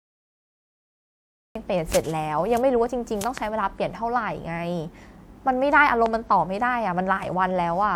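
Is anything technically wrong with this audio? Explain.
Yes. From 0 to 1.55 s there is digital silence, then a cut-off start: capture began late, so the speech enters mid-sound with no natural attack.

Loud pops sit on top of the continuing speech: a double pop from 3.24 to 3.40 s, roughly 15 dB above the speech, and a single pop from 6.06 to 6.08 s, roughly 10 dB above it. The likely cause is a voltage step or pulse from a plug, switch, static discharge or driver glitch, shaped by the downstream circuits.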